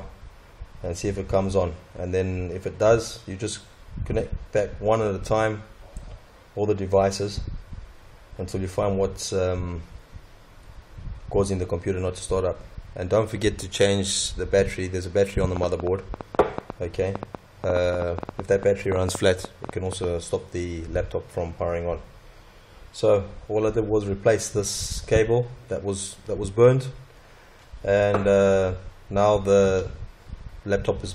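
From 15.57 to 20.05 s, a train of clicks pops irregularly at 6.7 per second, likely interference, showing as thin, tall vertical spikes on waveform and spectrogram.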